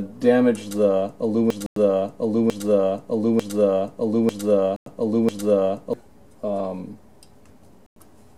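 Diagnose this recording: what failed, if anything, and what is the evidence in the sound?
A stall somewhere in the buffer or playback path, likely a player or stream that stopped receiving new data, left the last fragment it held being sent again and again. The result is a broken-record loop from 1.50 s to 5.93 s: a piece about 0.90 s long repeats exactly, back to back, five times. Whatever sound belonged in those four and a half seconds is gone, replaced by the same fragment cycling.

The audio was also handled in 3.0 s chunks, with silence inserted at each join, a problem in the chunked storage or playback stage. This produces a gap between chunks: holes of 100 ms at 1.66 s, 4.76 s and 7.86 s, spaced exactly 3.1 s apart. No sound is lost at these joins, but it is interrupted and resumes after each gap.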